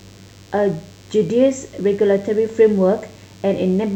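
Speech recording with DECT cordless phone buzz running through its whole length: a thin, steady buzz at 100 Hz carrying a dense stack of harmonics, sitting roughly 35 dB below the speech. The 100 Hz rate marks it as interference from a nearby DECT handset or base, which transmits a short radio burst every 10 ms. The audio circuitry rectifies each burst, turning the radio pulses into an audible pulse train.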